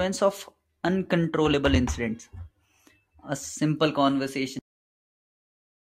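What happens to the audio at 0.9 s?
Nothing goes wrong at 0.9 s; the speech carries on intact through that moment, with no dropout, click or distortion.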